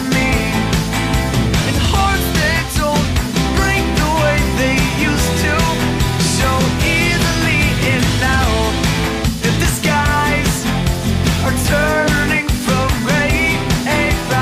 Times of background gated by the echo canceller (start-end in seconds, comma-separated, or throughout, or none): none